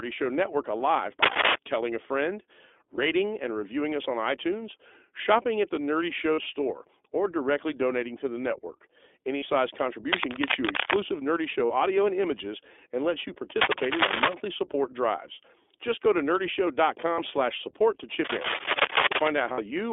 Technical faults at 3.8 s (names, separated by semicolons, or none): iLBC codec